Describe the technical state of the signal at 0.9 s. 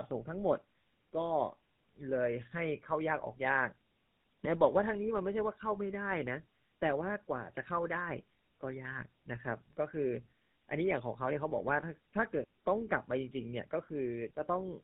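At 0.9 s, as throughout the clip, tandem speech coding is present: two speech codecs in sequence, the second recoding the first's degraded output, leave speech rough, warbly and band-limited to about 3.8 kHz.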